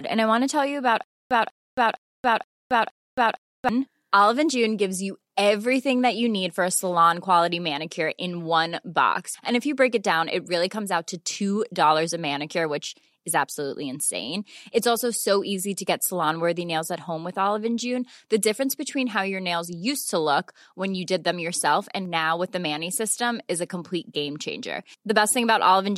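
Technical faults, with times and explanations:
1.04–3.69 s, stutter with silent gaps: just after "to tell you about", a burst of about 195 ms of speech repeats five times, each followed by roughly 272 ms of digital silence, giving an even cycle of about 467 ms. The playback or stream likely stalled, replaying its last buffered fragment at each retry before running empty. The speech that should have filled this stretch is missing rather than delayed.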